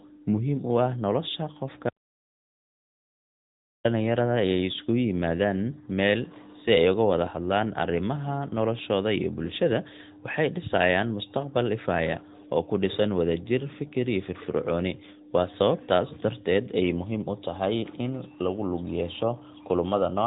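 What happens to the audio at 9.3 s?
At 9.3 s the speech is still under the AMR narrowband mobile codec, which runs through the whole clip. Nothing passes above about 3.8 kHz. A vocal-tract model rebuilds each frame from a few pulses, so the voice sounds plainly buzzy and synthetic, even at a fairly high rate near 10 kbps.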